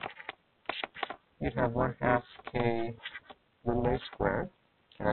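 From the start, a noise suppressor built for speech is applied to the sounds here. It treats sustained tones and tails as noise, so held material pumps and thins by around 20 dB while attacks pass. This is a slow, content-driven swell and sag, unlike a steady gain change.

Throughout the whole clip there is also overlap-add ripple. The frames were rejoined with an overlap that does not sum to a constant gain, so the level dips by up to about 60 dB once per frame, around 300 times a second. It is heard as a metallic buzz with extra tones around each note. Its rate is fixed and far faster than the suppressor's pumping, which follows the sound itself.

The sound is cut by the noise suppressor at 0.19 to 0.68 s, 1.17 to 1.40 s, 3.17 to 3.65 s and 4.50 to 5.00 s. In these stretches, steady or decaying sound sinks by about 13 to 14 dB and its decay is cut short, while onsets survive. This is localised gating, not the clip-wide pumping. 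All of it sits within a band that stops at 4 kHz, which fits a G.711 mu-law call codec.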